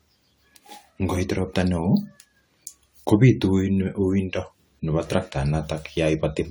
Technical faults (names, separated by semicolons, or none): generation loss